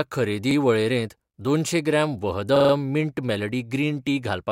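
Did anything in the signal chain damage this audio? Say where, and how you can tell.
Yes, a repeated buffer at the driver or buffer stage, at 0.51 to 0.56 s just before "वळेरेंत दोनशें ग्राम", and at 2.56 to 2.73 s before "मिंट मेलडी". Each 43 ms piece, fitting a 2048-sample buffer, replays once and then four times, with hard joins, as late data forced repeats.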